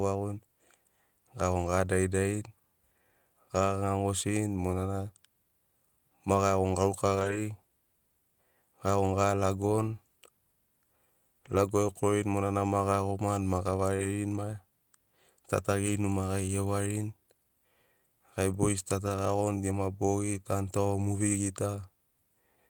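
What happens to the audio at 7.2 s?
From 7.15 to 7.37 s the speech passes through a lost packet rebuilt from error correction. Several packets went missing, and the decoder substituted the low-bitrate copies carried in the following packets, so there is no gap, but those frames sound rougher and noisier.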